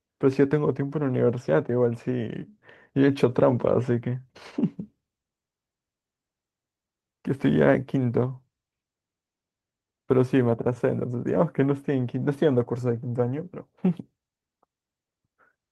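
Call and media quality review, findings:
No findings from the call and media quality review of this speech clip.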